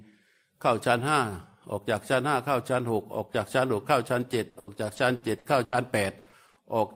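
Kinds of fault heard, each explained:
repeated packet loss (robotic sound): the speech breaks into rapid holes up to 80 ms long, six between 4.49 and 5.74 s and four between 6.18 and 6.58 s, each filled by prolonging the last sound. Unlike a single dropout, the close succession sounds choppy, with pieces missing.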